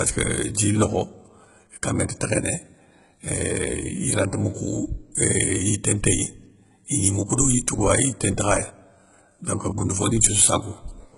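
Throughout the speech, heavy HE-AAC compression is the likely cause: treble is rebuilt from copied lower bands, so s sounds turn gritty and metallic, with nothing above 11.1 kHz.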